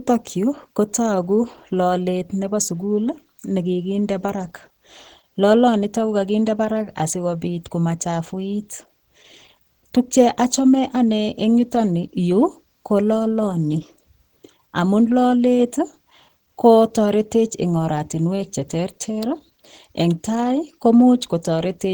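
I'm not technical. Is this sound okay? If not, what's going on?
No. The speech has been squeezed hard to save space, most likely by Opus compression at a very low setting, for the whole clip. To fit the budget, the encoder switched to its mode built for voices and rebuilt much of the detail from rough estimates rather than keeping the real sound. The voice therefore comes across as hoarse and somewhat muffled, with a grainy, noisy edge instead of clean, smooth tone.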